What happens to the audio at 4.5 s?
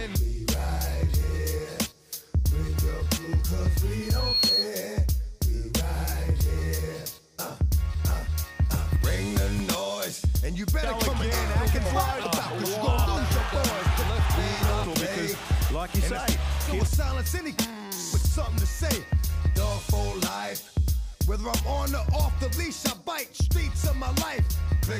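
At 4.5 s a loudspeaker feedback squeal (4.02–4.69 s) is under way. The microphone re-amplifies its own loudspeaker, and a 4.3 kHz tone swells over under half a second to about 5 dB above the sound. A spectrogram shows one bright horizontal line; the waveform envelope balloons.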